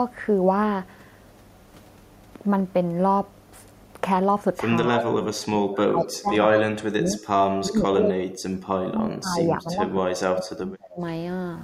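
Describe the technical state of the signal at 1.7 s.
At 1.7 s the speech signal is intact, with no dropout, clipping, glitch or other audible fault at that moment.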